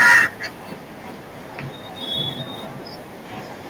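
Right from the start, 0.0 to 0.22 s, there's microphone overload: peaks run about 9 dB past the converter's limit, likely from input gain set too high, so roughly a fifth of the samples are flattened into harsh crackle. At 0.03 s the microphone volume steps down by about 2 dB all at once, likely the call software reacting to that clipping, and the level drops abruptly.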